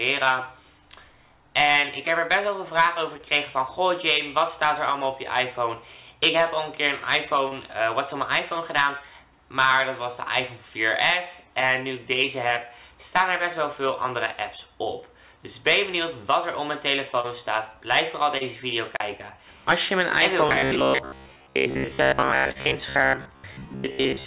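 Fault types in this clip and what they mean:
Short concealed packet loss: Brief smears or wobbles at about 3.17, 7.48, 17.2, 18.38 and 22.52 s, each lasting roughly 30 ms. Each time, a short piece of the call reached the decoder too late, and the receiver bridged the gap by extending the preceding sound.
Robotic sound from repeated short buffers: From 20.49 s to the end, the sound becomes a rigid metallic buzz near 66.7 Hz that loosely tracks the original. The likely cause is audio arriving too seldom, with most of the stretch filled by repeating 15 ms chunks.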